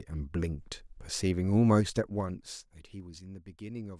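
From 1.71 s to 3.2 s the speech is turned down with zipper noise. The gain is applied in unsmoothed steps of 2 dB, around five per second, for a total drop of roughly 15 dB. Because each jump happens instantly rather than being ramped across samples, it puts a small discontinuity in the waveform. The result is a faint, regular ticking that rides on the speech for as long as the level keeps falling.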